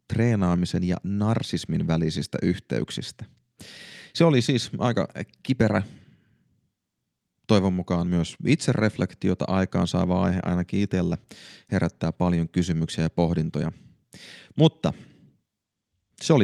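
Nothing goes wrong anywhere in this recording, so there's simply nothing here to point out.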